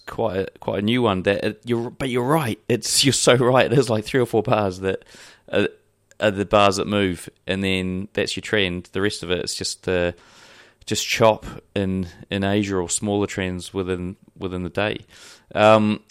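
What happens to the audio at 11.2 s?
Nothing goes wrong at 11.2 s; the speech carries on intact there, with no dropout, click, distortion or other fault.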